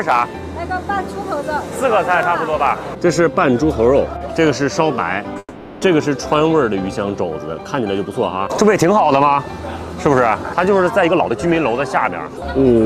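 At 2.23 s there is a small jump forward in the sound, likely a dropped buffer (overrun). The input was not read before the hardware overwrote it, so a few milliseconds vanished and the two sides were butted together without any silence.

From 5.39 to 5.84 s the audio stalls into a fading buzz, ending in about 40 ms of silence, likely a call audio freeze. Delayed packets emptied the jitter buffer, so the receiver stretched the last sound over 430 ms, then resumed where it stopped, adding delay but losing nothing.

At 8.57 s a second, smaller skip of a few milliseconds points likely to another dropped buffer (overrun), the same missed-read failure as at 2.23 s.

From 11.01 to 12.81 s the sound runs hurried at unchanged pitch, about 121 % speed. This is jitter buffer speed-up: the receiver, holding surplus audio, repeatedly cut out short pitch-period pieces, removing around 0.4 s in total to bring its delay back down.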